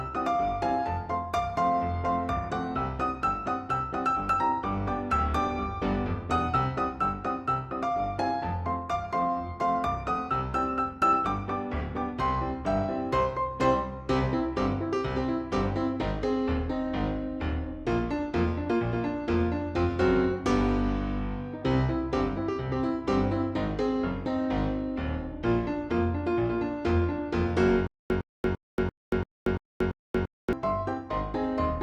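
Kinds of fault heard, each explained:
Stutter with silent gaps: from 27.87 to 30.53 s, the same 108 ms burst comes back seven times, each followed by 233 ms of digital silence, on a steady 341 ms cycle. It's likely a stalled player replaying its last fragment, and the audio that belonged there is lost.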